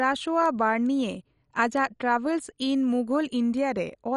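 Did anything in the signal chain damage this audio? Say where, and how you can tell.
Yes. Throughout the speech, the codec stage has left it dull and gurgling, with nothing above 11.3 kHz and a grainy roughness. That points to MPEG Layer II compression, likely at a rate around 48 kbps, where upper sub-bands are dropped and the remaining ones coarsely quantised.

Three isolated bit error spikes sit at 0.46, 1.77 and 3.57 s. Each is a single broadband tick lasting only a sample or two, unrelated to the speech around it. That fits a flipped bit in storage or on a digital link, briefly throwing the sample value by a power of two.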